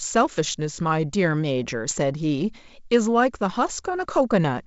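At 1.89 to 1.92 s, and again at 3.70 s, the speech breaks into a rough pop from bit errors on an ADPCM link. Each flipped bit throws off the decoder's step size and predictor, so the damage rings on briefly with a sudden level jump, rather than the gap or smoothed fill that packet loss leaves.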